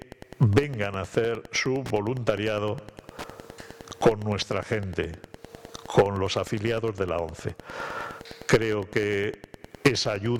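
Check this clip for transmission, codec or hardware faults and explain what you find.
One fault runs through the whole clip: Wi-Fi interference. A nearby Wi-Fi radio is coupling into the audio circuitry, and the circuit rectifies its beacon transmissions into the audio band. The beacon repeats every 102.4 ms, so the result is a steady ticking just under ten times a second, lying roughly 20 dB below the wanted sound and present from start to finish.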